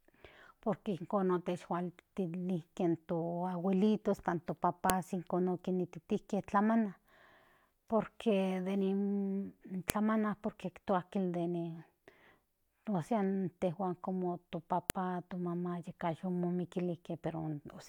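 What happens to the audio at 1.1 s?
Nothing goes wrong at 1.1 s; the speech continues intact through that moment, with no dropout, click, distortion or other fault to be heard.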